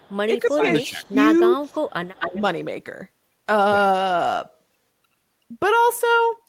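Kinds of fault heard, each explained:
Echo leak: A faint delayed copy of the speech comes back about 285 ms behind the original at the start and near 1.9 s, sitting roughly 35 dB down, then returns much stronger, only about 10 dB below the speech, from 2.14 to 2.41 s with a 256 ms lag. The likely cause is a loudspeaker on the far end whose echo canceller let some of its microphone pickup through. Unlike room reverberation, which trails off smoothly, this is a distinct repeat at a fixed delay.
Speech suppressed in double talk: Three times, at 0.45 to 0.69 s, 0.86 to 1.17 s and 1.49 to 1.81 s, the speech is pulled down for a few hundred milliseconds, by around 15 dB in the first two and about 20 dB in the third. This is likely an echo canceller that could not tell its own talker from loudspeaker pickup while both sides spoke, so it turned everything down. Unlike packet-loss dropouts, the speech dips rather than vanishing into silence or glitches.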